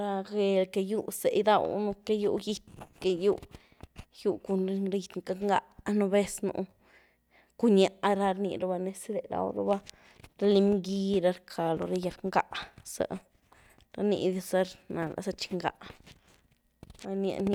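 No technical faults are audible anywhere in the speech.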